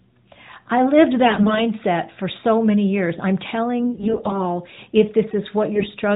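AMR bit errors occur from 1.24 to 1.63 s (after "I lived", before "for so many years"), from 3.80 to 4.41 s (after "so many years I'm") and from 5.74 to 5.87 s. Corrupted low-priority bits misplace the excitation pulses. Pitch and level hold steady but turn scratchy and gargly, with no gap or muting as a dropped frame would cause.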